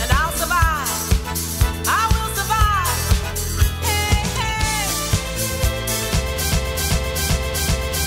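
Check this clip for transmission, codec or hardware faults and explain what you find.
One fault is audible, a broken-record loop. From 6.52 s to the end, a 0.39 s fragment repeats four times back to back, likely because the stream stalled and kept replaying its last buffered piece, losing the audio that should have followed.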